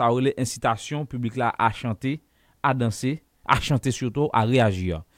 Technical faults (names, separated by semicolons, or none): none